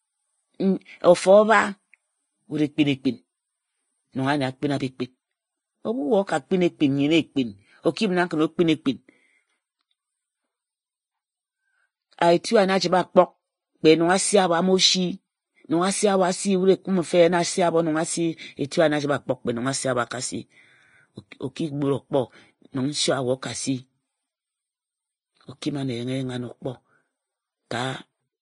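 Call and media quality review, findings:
Vorbis compression, throughout. Speech band-limited, nothing above about 10.6 kHz; treble hissy and grainy, consonant attacks smeared. Likely low-bitrate Vorbis encode, fitting roughly 26 kbps: coarse residue quantisation turns fine high-frequency detail into noise-like fill.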